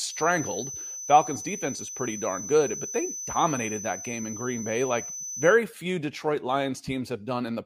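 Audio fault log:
0.00–5.61 s, feedback whistle: a thin, steady 6 kHz tone sits roughly 10 dB under the speech, likely from a loudspeaker-to-mic loop hovering right at the feedback point.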